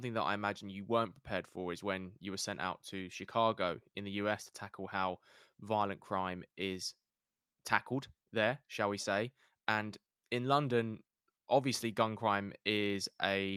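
Listening to the speech here, nothing stood out as a technical fault at any point.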